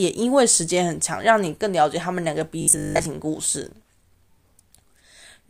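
From 2.62 to 3.06 s the speech turns into robotic sound from repeated short buffers, a rigid metallic buzz at 50 Hz that follows the words only roughly. Unlike gappy dropouts, the fixed pitch fits a 20 ms chunk being replayed, likely for most of that stretch.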